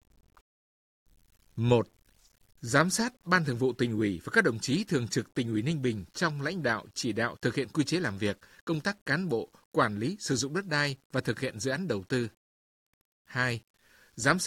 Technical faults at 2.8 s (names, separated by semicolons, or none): low bit depth without dither